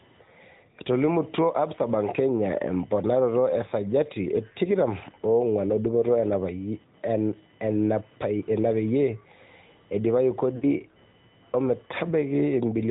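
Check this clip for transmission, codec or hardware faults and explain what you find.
Three faults are present: computer activity noise and AMR narrowband coding throughout, plus a brief run of lost AMR speech frames near the end.

Computer activity noise runs through the whole recording: processor or peripheral load disturbs the shared audio ground, adding a buzzing whine near 1 kHz, about 35 dB below the speech.

AMR narrowband mobile codec damage is plainly audible throughout. Everything above 4 kHz is gone, and the pulse-excited vocal tract model leaves the voice buzzy and synthetic, consistent with a mid-rate mode around 10 kbps.

Lost AMR speech frames occur from 10.56 to 10.65 s, a 60 ms gap that fits three consecutive 20 ms frames. The decoder repeats the last good parameters with falling gain, so the sound smears and fades briefly before recovering roughly.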